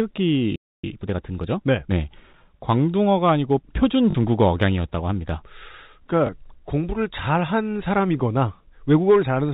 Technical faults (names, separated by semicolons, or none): playback stall; time-compressed catch-up; packet loss with last packet repeated